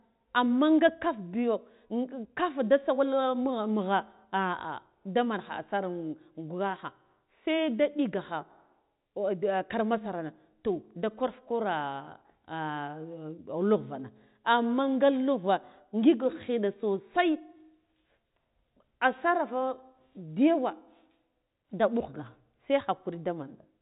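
Speech carried over a G.711 mu-law telephone path, its bandwidth ending near 3.8 kHz as that format dictates, with no technical faults to report.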